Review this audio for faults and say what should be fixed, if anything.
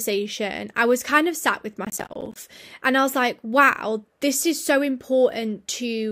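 From 1.85 to 2.43 s the speech is torn by a gritty burst of processor overload crackle. The processing could not finish its short audio buffers on time, around 10 ms each, and about twenty deadlines were missed, each one punching a hard-edged gap of silence into the sound. Unlike a single dropout, these gaps cluster densely and stop once the load eases. To prevent this, reduce competing processor load or use larger buffers.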